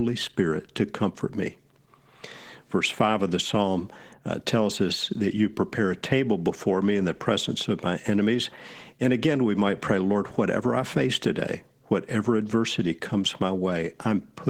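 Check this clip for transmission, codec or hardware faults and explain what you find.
The speech has a codec fault throughout: Opus voice compression. Throughout the clip, a low-rate Opus encoder in hybrid mode coded the lower band with SILK linear prediction and added a CELT layer above 8 kHz. The coarse excitation coding, consistent with about 16 kbps in 20 ms frames, leaves the speech plainly hoarse and slightly robotic.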